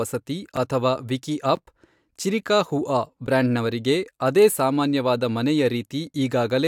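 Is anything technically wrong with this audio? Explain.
Yes. This speech clip has three short blocks of digital silence, heard as small ticks at 0.56 s, 1.56 s and 3.27 s. The gaps are brief, about 6.4 ms, 13.4 ms and 10.7 ms, so each comes across as a tick or tiny pop, not an audible hole. At each one the waveform drops straight to silence and back with no fade. The playback program likely didn't fill its output buffer in time, and the 10.7 ms gap fits a 512-sample buffer.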